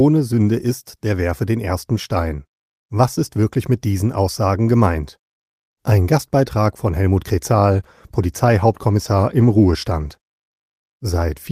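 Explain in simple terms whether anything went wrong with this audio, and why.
Something did go wrong, starting at about 7.73 s: a call bitrate drop. The connection got squeezed, so the encoder had less room and coded the speech more coarsely, cutting the top end down to 12 kHz. It sounds duller and rougher through to about 11.45 s.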